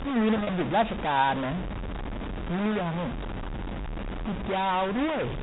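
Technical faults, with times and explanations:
Throughout: grainy noise or distortion rides on the speech, and the pauses fill with a steady hiss rather than going quiet. This points to a likely stuck bit, one data bit held at a fixed value. Unlike codec noise, the hiss persists with no signal and doesn't follow level.
0.37 to 0.49 s: packet loss with pitch repetition. About 60 ms went missing, spread over roughly 120 ms in short runs of up to 30 ms. The gaps are bridged by repeating the last pitch period, heard as a briefly held, buzzy tone, not silence or clicks.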